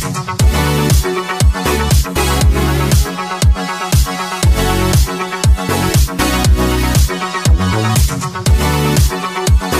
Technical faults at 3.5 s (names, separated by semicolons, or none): none